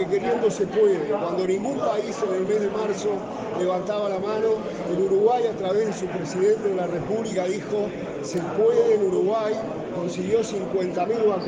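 A short, irregular burst of scratchy crackle breaks through the sound from 8.33 to 8.38 s, lasting about 50 ms. This is loose connector crackle: a worn or dirty contact briefly made and broke, chopping the signal into ragged fragments.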